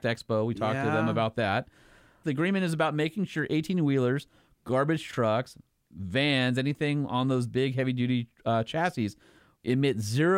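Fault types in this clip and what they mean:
No technical faults can be heard anywhere in the speech recording.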